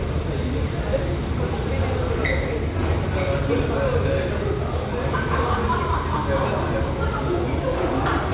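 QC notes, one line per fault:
No faults found.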